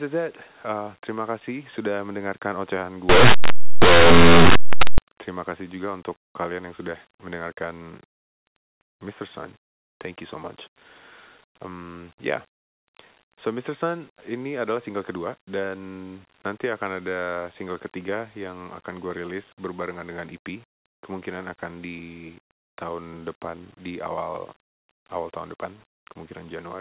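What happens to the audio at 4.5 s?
At 4.5 s the speech is inside a burst of linear audio read as companded, running from 3.09 to 4.98 s. It starts after "kasih sudah mendengarkan ocehan" and ends before "terima kasih juga untuk". Plain 8-bit samples are decoded as mu-law codes. Values just on one side of zero jump to the largest outputs, while those on the other side stay small. The result is loud, harsh distortion.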